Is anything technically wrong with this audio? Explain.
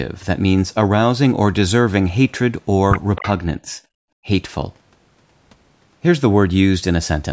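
Yes. Three separate problems turn up in this speech clip, all between about 3.1 and 4.3 s.

From 3.15 to 3.29 s, a faint, delayed second copy of the talking trails the original by 266 ms, sitting roughly 15 dB below it. This is an echo leak, likely from the far end playing the call through a loudspeaker: its echo canceller failed to strip out everything its microphone caught, so the residue was sent back down the line.

Between 3.64 and 3.80 s, the talker's level sags by a few decibels for around a sixth of a second, a brief softening that sounds as if the voice momentarily backs off the microphone. This is speech suppressed in double talk, likely caused by both sides speaking at the same moment. The echo canceller could not tell the local talker apart from the loudspeaker echo, so it pulled down everything it heard.

From 4.08 to 4.25 s, the room background abruptly falls away by about 37 dB, leaving a hole in the ambience for roughly 150 ms before the background snaps back. 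This is background gated by the echo canceller. While the loudspeaker was active, the canceller clamped the microphone down hard to keep echo out, muting the room along with it, and released the microphone once playback eased.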